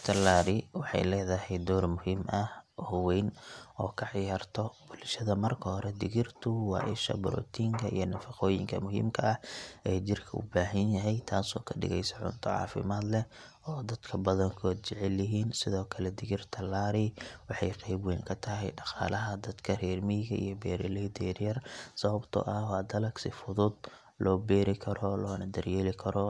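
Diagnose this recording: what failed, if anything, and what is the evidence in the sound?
Nothing failed: the recording carries no audible evidence of a fault in any stage.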